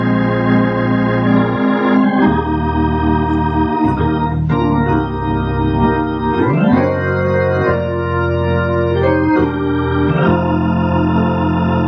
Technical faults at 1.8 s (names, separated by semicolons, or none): none